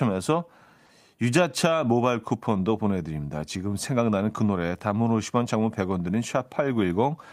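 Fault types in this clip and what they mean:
Clock drift between sender and receiver: Small, uneven timing hiccups recur through the whole clip and the pacing feels faintly unsteady. The sender's audio clock runs roughly 3 percent slower than the receiver's, so the jitter buffer keeps draining and the receiver has to make up the shortfall.
Repeated timing corrections: From 0.46 s to 7.07 s the speech carries slight stutters and a loose tempo, playing at 97 percent speed. The receiver repeatedly duplicates short pieces to keep pace with the slow sender, adding roughly a fifth of a second in total.
Short stall from a late packet: At 0.86 to 0.91 s one sound is held a touch too long, with a faint buzz or dip. A packet arrived late, the buffer ran empty, and the receiver stretched 30 ms of sound. Nothing is lost, though delay grows by 30 ms.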